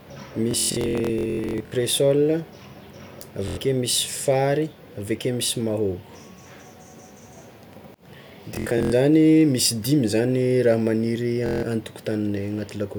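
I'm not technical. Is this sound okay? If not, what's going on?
No, there's Bluetooth stutter. The wireless link kept dropping bits of speech, so the receiver replayed tiny slices, making a buzzy, machine-gun stutter at 0.51–1.72 s, 3.48–3.57 s, 8.55–8.92 s and 11.46–11.63 s. Afterwards the speech picks up further along, with those moments skipped.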